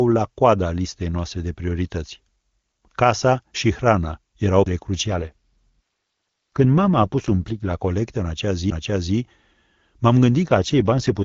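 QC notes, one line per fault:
5.05–7.74 s and 10.46 s to the end, AMR rate drop: the speech turns rougher, buzzier and more synthetic, because the AMR-WB coder falls from 23.85 to 8.85 kbit/s and spends the freed bits on error protection. There is no gap and no loss of bandwidth. On a spectrogram the band still reaches about 7 kHz, but harmonics lose definition and look grainier. The waveform shows no dropout. Outside these spans the speech is coded at 23.85 kbit/s.
8.70 s, CD skip: a short tick and a mute of about 10 ms, after which the sound resumes from a different point. The laser has jumped to another turn of the disc's spiral, so continuity breaks abruptly rather than fading. On the waveform this looks like a hairline near-silent notch with mismatched signal on either side. The spectrogram shows a thin vertical broadband line where the click lands, then a discontinuity in the harmonic traces.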